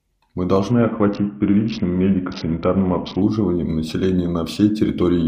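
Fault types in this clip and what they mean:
Bluetooth SBC bit pool drop: From 0.71 to 3.22 s the speech loses its treble and turns gritty. The link seems to have come under strain, and the phone cut the SBC bit pool to keep the stream alive. The sound points to a fall from a normal bit pool near 31 to one around 6, about 55 kbps. The top sub-bands go almost empty, and the rest are coarsely quantised. Clarity returns once the rate recovers.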